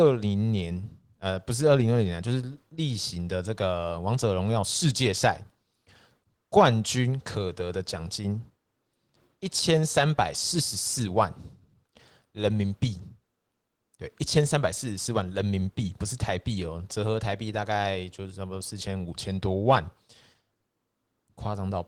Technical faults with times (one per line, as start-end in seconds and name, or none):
none